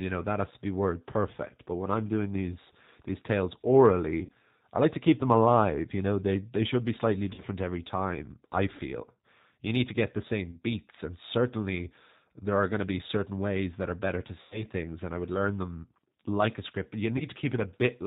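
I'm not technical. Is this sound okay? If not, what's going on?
No. The whole recording has passed through the G.729 codec, a phone-call compression method that rebuilds speech from a simplified model of the voice. Everything above 4 kHz is gone, so the speech sounds muffled, slightly rough and artificial throughout.

There are also short dropouts from VoIP packet loss concealed by the speech codec, at 4.25–4.30 s, 7.34–7.41 s, 10.51–10.55 s, 14.41–14.64 s (the longest) and 17.18–17.25 s. Pieces of the call went missing, and the decoder filled each gap by stretching the last sound into a fading buzz or noise, and the voice stayed weak or distorted for a moment after each gap.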